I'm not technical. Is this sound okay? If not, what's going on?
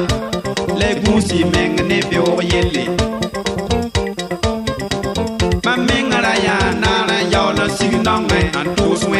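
Yes, it's fine; nothing here sounds wrong.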